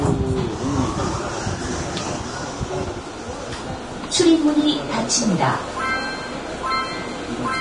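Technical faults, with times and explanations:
Throughout, Vorbis compression: nothing above 10.6 kHz, and the treble is hissy and grainy. Likely heavy Vorbis coding near 32 kbps, turning fine detail into noise.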